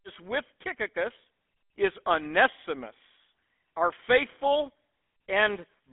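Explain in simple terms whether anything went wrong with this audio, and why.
Something did go wrong, and it runs through the whole clip, start to finish. The speech has been squeezed through the GSM full-rate codec, the old mobile-phone coder. It rebuilds the voice from a rough model of the throat and mouth driven by a thinned-out train of pulses, which gives it that buzzy, gravelly edge you can plainly hear. The phone line around it only carries roughly 200 Hz to 3.5 kHz, so the voice also sounds thin and muffled.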